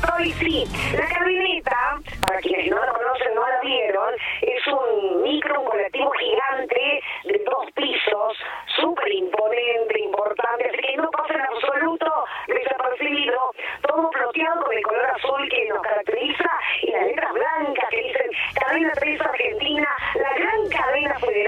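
Right from the start and all the way through, there's a channel delay (doubling): one side runs about 46 ms late, which fits a 2048-sample buffer, and once summed to mono that late copy lands as a distinct slap echo at equal level.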